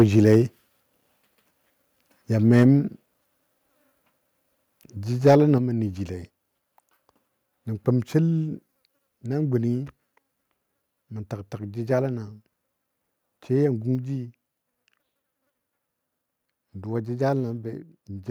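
Right from the start, 0.00 to 0.36 s, the loudest bits crackle and sound harsh. That's microphone overload: the input was likely set too hot, so peaks pushed about 3 dB past the converter's ceiling and got their tops sheared off. It happens again, more mildly, at 2.55 to 2.63 s, about 1 dB over. Right after, at 2.63 s, everything, voice and room alike, drops about 2 dB in one go. That's the microphone volume stepped down, most likely the call software reacting to the clipping by trimming the input gain. At 5.26 to 5.35 s, just before "mə nəjile", there's another overload burst, about 2 dB over, with a fair chunk of the waveform flattened. At 5.58 s, also ahead of "mə nəjile", the level steps down again, this time by about 5 dB, so it's a much more obvious sudden quieting.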